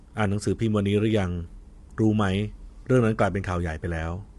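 Low-delay AAC compression runs throughout the speech, from start to finish. The voice sounds rough and grainy, with noise filling the gaps between pitch harmonics, and nothing is heard above 11.5 kHz. The likely cause is the AAC-ELD codec used for video calls: its short frames resolve harmonics poorly and spend bits quickly, and damage this plainly audible fits a bitrate around 32 kbps, forcing the encoder to cut the top band.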